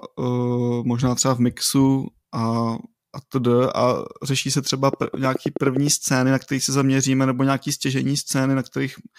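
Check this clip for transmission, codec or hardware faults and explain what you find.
One fault stands out, a train of clicks in the speech. From 4.93 to 5.88 s, after "řeší se třeba" and before "scény na kterých se", about ten evenly spaced ticks at 9.6 per second peak roughly 10 dB above the speech. This is likely interference or a faulty connection injecting repeated pulses.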